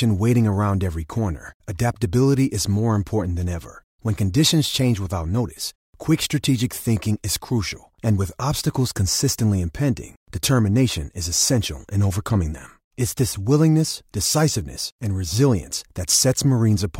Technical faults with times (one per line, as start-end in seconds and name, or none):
none